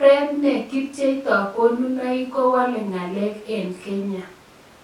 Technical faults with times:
none

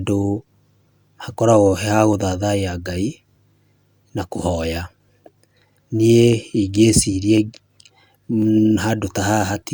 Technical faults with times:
1.09-9.47 clock drift buffer slips

